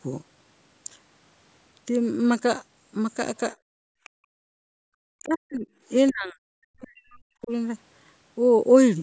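A speech recording from a call, band-limited at 8 kHz by the normal microphone processing, in which the echo canceller clamped down on the microphone between 3.56 and 4.88 s. The background gated by the echo canceller falls away by about 39 dB, leaving near-silence for roughly a second and a half before the room tone returns. Faint scraps of a second voice, about 30 dB below the talker, surface at 4.04 and 6.07 s. This is likely the other side's voice leaking through, loudspeaker output the canceller failed to subtract. From 5.16 to 5.67 s and again from 6.11 to 7.51 s, the talker's own speech sinks by around 40 dB in chunks. The likely cause is speech suppressed in double talk: both ends spoke together, and the canceller attenuated everything rather than separate them.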